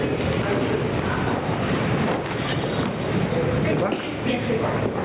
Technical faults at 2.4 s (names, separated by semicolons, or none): gain pumping